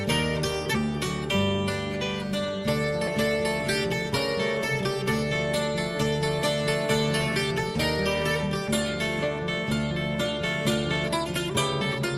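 A skip ahead at about 3.07 to 3.24 s drops roughly 0.7 s of audio and splices both sides directly, leaving an abrupt vertical seam on the spectrogram with no silent gap.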